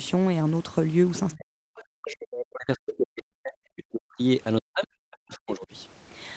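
In this speech clip the echo canceller likely failed to remove all of the far end's loudspeaker sound from the microphone, so the other side's voice leaks through in two brief scraps, at 1.32 to 1.36 s and 1.76 to 1.81 s. They sit roughly 25 to 30 dB below the talker. The same canceller also likely misjudged stretches where both sides were talking at once and clamped down on everything. That is speech suppressed in double talk, and it hits at 1.36 to 1.55 s, from 1.82 to 4.22 s, and again from 4.61 to 5.68 s. The talker's level sinks by as much as about 40 dB at the worst moments, so the speech thins out, gets choppy and drops away in pieces. All of this is heard through a call path band-limited to 8 kHz by the Opus coding.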